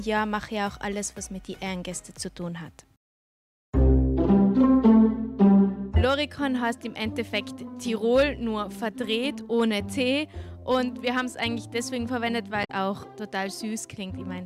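Damaged data in the compressed stream shows up at 12.61 to 12.70 s as a short garbled blip of about 90 ms. Corrupted bytes there make the decoder misread those frames, lose sync, and hunt for the next valid frame header before normal decoding resumes.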